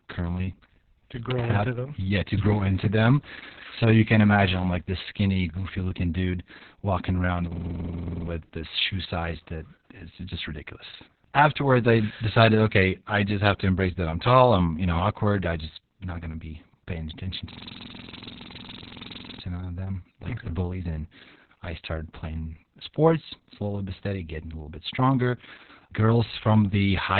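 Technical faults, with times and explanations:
Throughout, Opus voice compression: nothing above 4.3 kHz, with muffled, hoarse, slightly robotic speech, consistent with narrowband SILK coding at a very low bitrate near 6 kbps.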